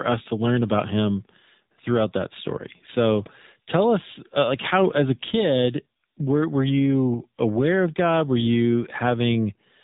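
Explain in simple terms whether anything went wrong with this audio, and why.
The whole recording sounds like an old mobile phone call: thin, muffled, and noticeably buzzy and synthetic, with nothing above about 3.8 kHz. This is the AMR narrowband mobile codec, which squeezes speech into a simplified model of the voice at a low data rate.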